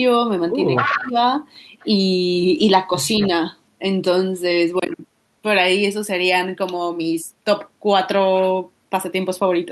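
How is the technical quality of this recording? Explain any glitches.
The recording has two related call-path faults in the first few seconds of the speech. Echo leak occurs at 0.75–1.12 s (about as loud as the talker), 1.80–1.87 s (very faint) and 3.19–3.27 s (about 15 dB below the speech), as a delayed copy trailing by 254 ms, likely from a far-end echo canceller letting its loudspeaker pickup through. Speech is suppressed in double talk at 0.91–1.17 s: during the overlap the speech dips by about 20 dB, likely because the canceller attenuated both signals together.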